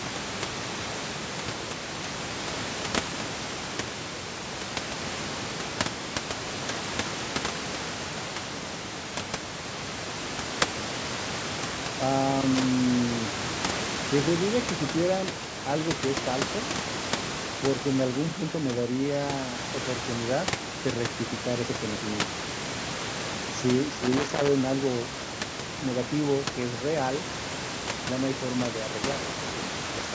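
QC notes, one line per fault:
12.31 to 12.68 s and 24.03 to 24.48 s, loose connector crackle: two irregular bursts of scratching crackle break into the speech. A worn or dirty contact is rapidly making and breaking, chopping the signal. Any DC on the line turns each break into a pop.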